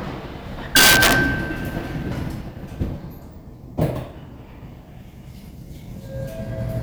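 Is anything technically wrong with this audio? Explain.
Yes. Between 0.76 and 1.13 s the audio suffers integer overflow. The signal was pushed about 5 dB past the top of the integer range, and instead of being held at the maximum, each sample that exceeded it wrapped around to the opposite extreme. Every peak therefore jumps across the full range in a single step. On these everyday sounds that comes through as harsh, violent cracks on the loudest moments, far sharper and more abrupt than ordinary clipping.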